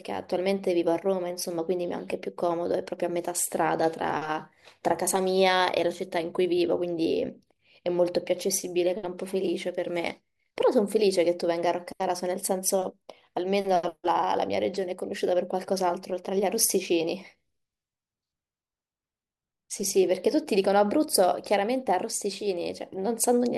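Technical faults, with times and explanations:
The speech signal shows no technical faults at any point in the recording.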